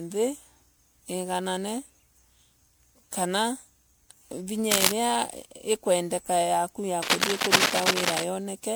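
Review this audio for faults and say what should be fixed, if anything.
Generation loss runs through the whole speech recording: a swirly, hollow texture with smeared consonant onsets and nothing above 20.9 kHz, which fits an MP3 chain at around 128 kbit/s likely re-encoded about five times. Keep a lossless master and encode to MP3 only once, at the final step.

Cable scratch noise appears at 4.70 to 4.92 s and again from 7.02 to 8.24 s, just after "ikwendeka yaku ya". These are dense, uneven rustling bursts about 5 dB above the signal, likely from a worn cable or connector being moved. Replace or reseat the faulty lead and secure it so it cannot shift during recording.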